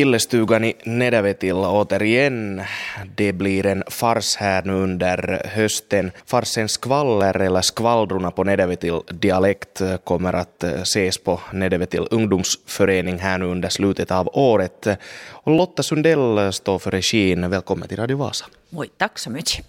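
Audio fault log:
3.03–15.58 s clock drift buffer slips: about four regular clicks every 4.18 s, vertical spectrogram lines and waveform jumps; likely mismatched clocks dropping or repeating sample blocks.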